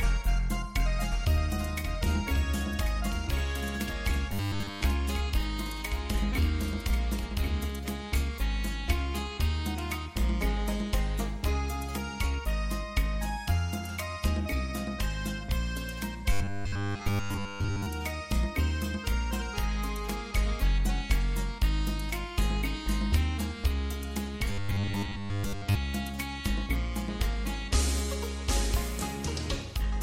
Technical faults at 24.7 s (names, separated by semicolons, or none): robotic sound from repeated short buffers